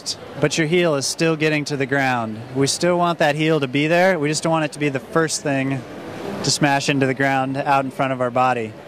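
No technical faults can be heard in the audio. Nothing in the sound stands out as a problem at any point.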